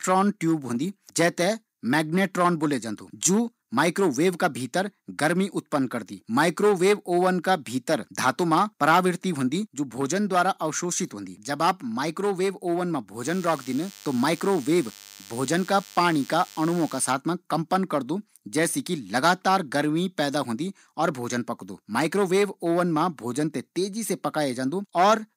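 A nearby DECT cordless phone's 100 Hz radio bursts got rectified into the audio path, laying a thin, harmonic-rich buzz well under the speech from 13.23 to 17.12 s.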